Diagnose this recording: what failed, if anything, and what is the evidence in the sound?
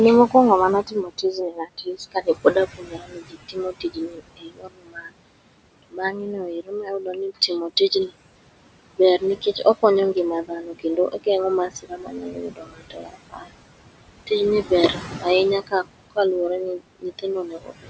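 In call processing, the noise suppressor pulls the room noise, which sits about 13 dB below the speech, down by about 21 dB frame by frame. The background dips between phrases, and the leftover rises under the speech.

The same suppressor also misreads parts of the speech as noise, cutting them by up to about 22 dB at 0.83–5.12, 5.83–7.5, 8.97–9.83, 10.14–11.27, 11.69–13.5, 14.63–15.25, 15.67–16.17 and 16.79–17.9 s. Soft sounds come out swallowed or faint.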